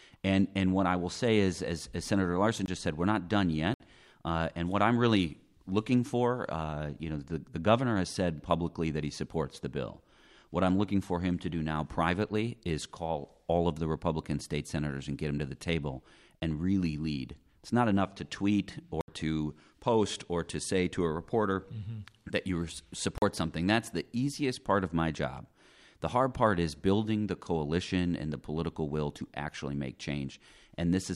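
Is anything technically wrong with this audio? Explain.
Yes. The speech has five blocks of digital silence, at 2.66 s just before "just said we're not", 3.74 s, 16.40 s, 19.01 s just before "to post or to", and 23.18 s just after "that you". Each time the signal drops straight to silence and returns abruptly, with no fade. The gaps last 20, 60, 20, 70 and 40 ms, so each is heard as a click or a brief hole.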